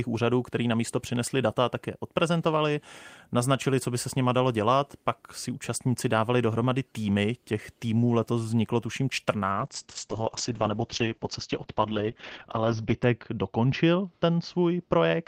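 A call bitrate drop hits this speech recording at 9.54 s and lasts to the end of the clip. The call's bandwidth estimate fell, so the encoder was told to spend far fewer bits, which fits a fall from around 32 kbps to about 8 kbps. With so few bits, the codec quantises more coarsely and narrows the band it codes from 20 kHz to 6 kHz. The voice turns dull and muffled, losing its upper detail, with a rough, watery edge.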